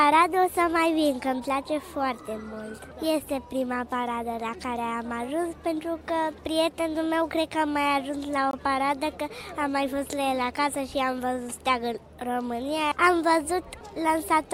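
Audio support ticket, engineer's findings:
Block of digital silence at 8.51–8.53 s: about 21 ms hole, hard cut in and out. Looks like the output buffer wasn't filled in time and got zeroed. Length fits a 1024-sample buffer.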